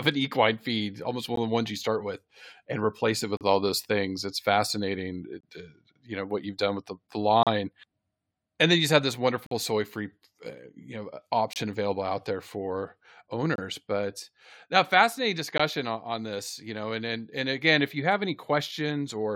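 Speech with gaps between stream segments. Hard-edged silent holes fall at 1.36, 3.37–3.41, 5.41–5.43, 7.43–7.47, 9.46–9.51, 11.53–11.56, 13.56–13.58 and 15.58 s. Each lasts 14 to 49 ms, and they recur every 2 s. Segment timestamps leave small spaces that playback fills with silence. No audio is lost.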